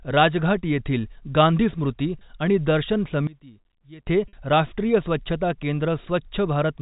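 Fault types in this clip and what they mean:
packet loss with pitch repetition: Twice the audio is bridged by repeating the last pitch period. At 2.19 s, after "गांधी स्मृती", 20 ms is held as a brief buzzy sustain, and at 4.28 s, just before "राष्ट्रीय स्वच्छता", 50 ms is held.
one channel inverted: From 3.27 to 4.07 s, between "गांधी स्मृती आणि दर्शन" and "राष्ट्रीय स्वच्छता", the centred speech collapses by about 21 dB into a faint residue, likely from reversed polarity cancelling in mono. A simple level drop would keep the tone intact.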